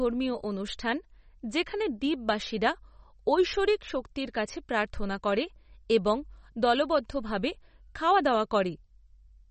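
Speech runs the full clip with plainly audible MP3 compression damage, likely from a low bitrate near 34 kbps: the spectrogram shows a hard ceiling at 8.3 kHz with nothing above it, and flickering, patchy gaps below where weak components vanish frame to frame, giving a watery, swirly texture and smeared consonant attacks.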